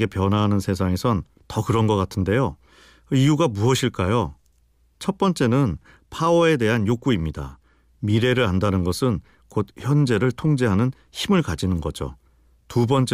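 No technical faults can be heard anywhere in this speech recording. There are no events to place on its timeline.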